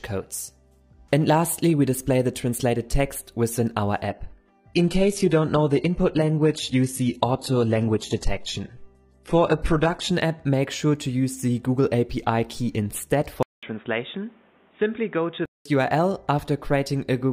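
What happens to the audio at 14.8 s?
Input switched to a poorer device, from 13.43 to 15.65 s: the sound turns dull and boxy, with nothing above 3.8 kHz, a few decibels quieter, with a new noise floor and a 200 ms gap at the switch, likely from a headset's narrowband call profile.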